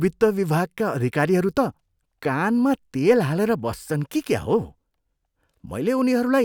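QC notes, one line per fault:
No faults detected in this clip.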